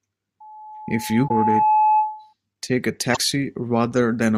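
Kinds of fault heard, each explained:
Loudspeaker feedback squeal: A steady tone near 859 Hz rises out of the speech from about 0.4 s, swelling over roughly two seconds until it sits about 5 dB above the talker, then cuts off at 2.33 s. A microphone is picking up the loudspeaker it drives. At that one frequency the loop hands back more than it receives, so the tone keeps feeding itself and growing.
Damaged data in a compressed stream: Two short glitches break into the speech, one at 1.27 to 1.31 s, riding over the squeal, and another at 3.12 to 3.17 s, each lasting about 40 to 45 ms. Corrupted bytes in the encoded stream left the decoder unable to read those frames properly, so it lost sync and had to search for the next valid frame header before playback settled again.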